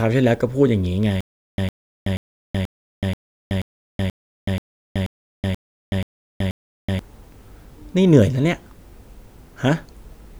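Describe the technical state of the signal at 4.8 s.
At 4.8 s the signal is inside a stutter with silent gaps running from 1.21 to 6.99 s. A playback stall, likely, makes each retry replay the same 107 ms fragment of speech, followed by 375 ms of digital silence, repeating every 482 ms for 12 cycles, with the intervening audio lost.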